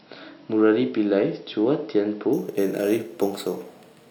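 Imaging from sample-and-hold upsampling starts at 2.33 s and runs to the end. Raising the rate from 12 kHz to 48 kHz by repeating samples without smoothing leaves a mirrored spectrum at 6 to 12 kHz, about 22 dB below the speech, heard as a metallic fizz following its level.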